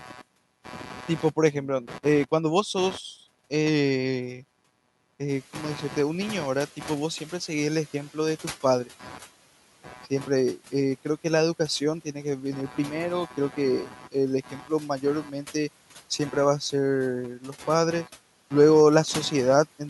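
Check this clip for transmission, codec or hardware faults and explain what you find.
Three faults show up: computer noise in the background the whole way through, several spots where the noise suppressor eats into the speech, and a stretch where the suppressor lags behind a jump in room noise.

Computer activity noise runs for the full clip. It's a buzzy, chirpy layer pulsing at around 150 times a second and sitting roughly 20 dB under the speech. It comes from the processor, graphics card or mouse loading up and dragging the audio circuit's shared ground around. That's why it tracks the machine's activity rather than anything in the speech, and it never really goes away.

Speech cut by the noise suppressor happens at 0.00–0.22 s, 9.84–10.11 s, 12.69–12.78 s, 13.28–14.70 s and 15.01–15.55 s. In each spot the suppressor mistook bits of speech for background and pulled them down with it, by about 7 to 10 dB. 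The worst one is around 13.3–14.7 s, where roughly half a second gets dipped. The affected parts sound swallowed or faint, like word edges going soft.

The noise suppressor catching up runs from 5.28 to 8.07 s. Around 5.5 s the room noise itself jumps by about 17 dB, which is just the recording environment and not a fault. The suppressor's noise estimate was still tuned to the quieter room, so the new background comes through with less reduction at first. It then sinks gradually over about 2.8 s until the reduction reaches about 8 dB.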